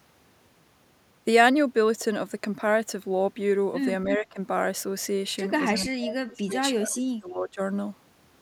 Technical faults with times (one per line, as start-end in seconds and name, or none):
4.05-4.37 speech suppressed in double talk
5.73-7.60 speech suppressed in double talk